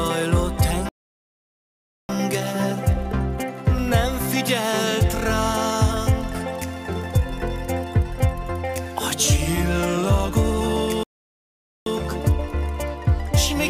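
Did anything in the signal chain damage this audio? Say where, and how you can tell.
Yes, at the playback stage. There are two playback stalls. The sound stops mid-flow at 0.89 s and stays silent until 2.09 s, a gap of about 1.2 s. It cuts out again from 11.03 to 11.86 s, about 0.83 s. Each time it resumes abruptly after dead silence, with no fade or decay. The likely cause is the player running short of data, or its output thread being blocked, so nothing reached the output until it recovered.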